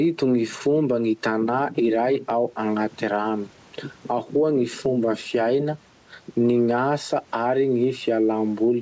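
Gain pumping runs through the whole speech clip: the gain swings by around 10 dB, likely from excessive mic gain feeding a fast limiter.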